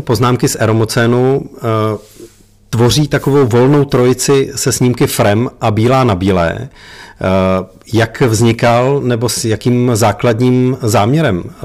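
A harsh, gritty fuzz rides on every louder syllable from start to finish, with crackle on the strongest peaks. This is hard clipping: the speech was driven roughly 12 dB past what a stage in the chain could pass, so about 7 percent of the samples were cut flat at the limit. Those squared-off tops generate harmonics high up the spectrum, which is where the brittle edge on loud moments comes from.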